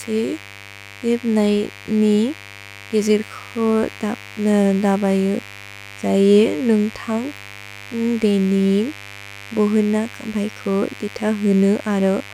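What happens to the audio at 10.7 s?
Mains buzz runs through the whole clip, including 10.7 s: switching spikes from a 50 Hz supply leak in, leaving a raspy, harmonic-rich buzz roughly 20 dB below the speech.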